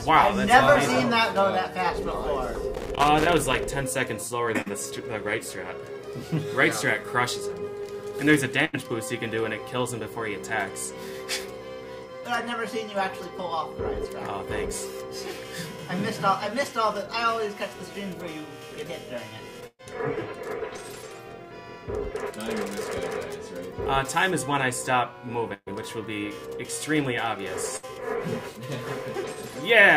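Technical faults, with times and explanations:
2.74–3.64 s, loose connector crackle: for nearly a second an irregular scratchy crackle breaks over the sound. A worn or dirty contact was making and breaking as it moved, chopping the signal on and off and adding pops where any DC on the line switched abruptly.
4.61–4.70 s and 20.77–20.80 s, short concealed packet loss: about 40 ms and then 20 ms of audio never arrived in time. The decoder bridged each hole by extending the preceding sound and blending back in, leaving a brief smear or wobble. At the first spot a further sliver, about 10 ms, is simply gone.
8.65–8.75 s, 19.67–19.81 s, 25.54–25.68 s and 27.76–27.85 s, burst of packet loss: runs of roughly 80, 120, 120 and 60 ms were lost. The receiver held the last sound as a buzz or hiss while fading it, reaching silence for about 50 ms and 40 ms at the middle two, then resumed with that stretch missing.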